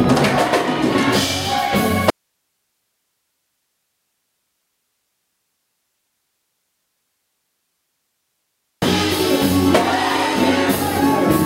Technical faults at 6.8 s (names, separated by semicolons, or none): audio dropout to a faint residue